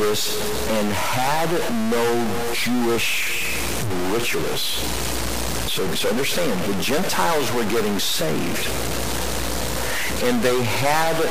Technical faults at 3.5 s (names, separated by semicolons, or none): stuck bit